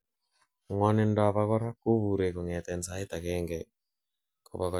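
Speech recording, nothing technically wrong with it.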